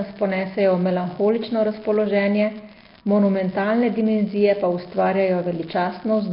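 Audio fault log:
Throughout: unreliable data bit. A steady crackle and fizz sits under the speech and carries straight on through the pauses, which tells you it isn't tied to the signal at all. What's going on is that one data line is flaky, so its bit flips in a random scatter of samples. Every flip adds a spike of exactly the same size, and together they make this even, sandpapery texture rather than separate clicks.
Throughout: Nellymoser compression. The speech has a rough, hissy halo and a smeared, underwater feel, with nothing at all above about 5.3 kHz. That's most likely the old Flash microphone codec, Nellymoser Asao, running at around 22.1 kbps and doing heavy damage. It works in short blocks on a fixed, tight bit budget. Weaker bands get no bits, so they get filled in with noise, which gives you the hiss and the murky smear.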